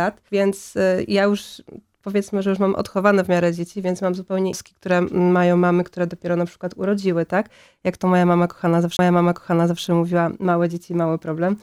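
CD skips occur at 4.52 s and from 8.97 to 8.99 s. Each time the laser was knocked off its track, or misread a flaw, and landed on another turn of the disc's spiral. The player mutes briefly, a few milliseconds at the first skip and roughly 20 ms at the second, leaving a small tick. The audio then resumes from a different point, so the flow of sound jumps abruptly instead of continuing seamlessly.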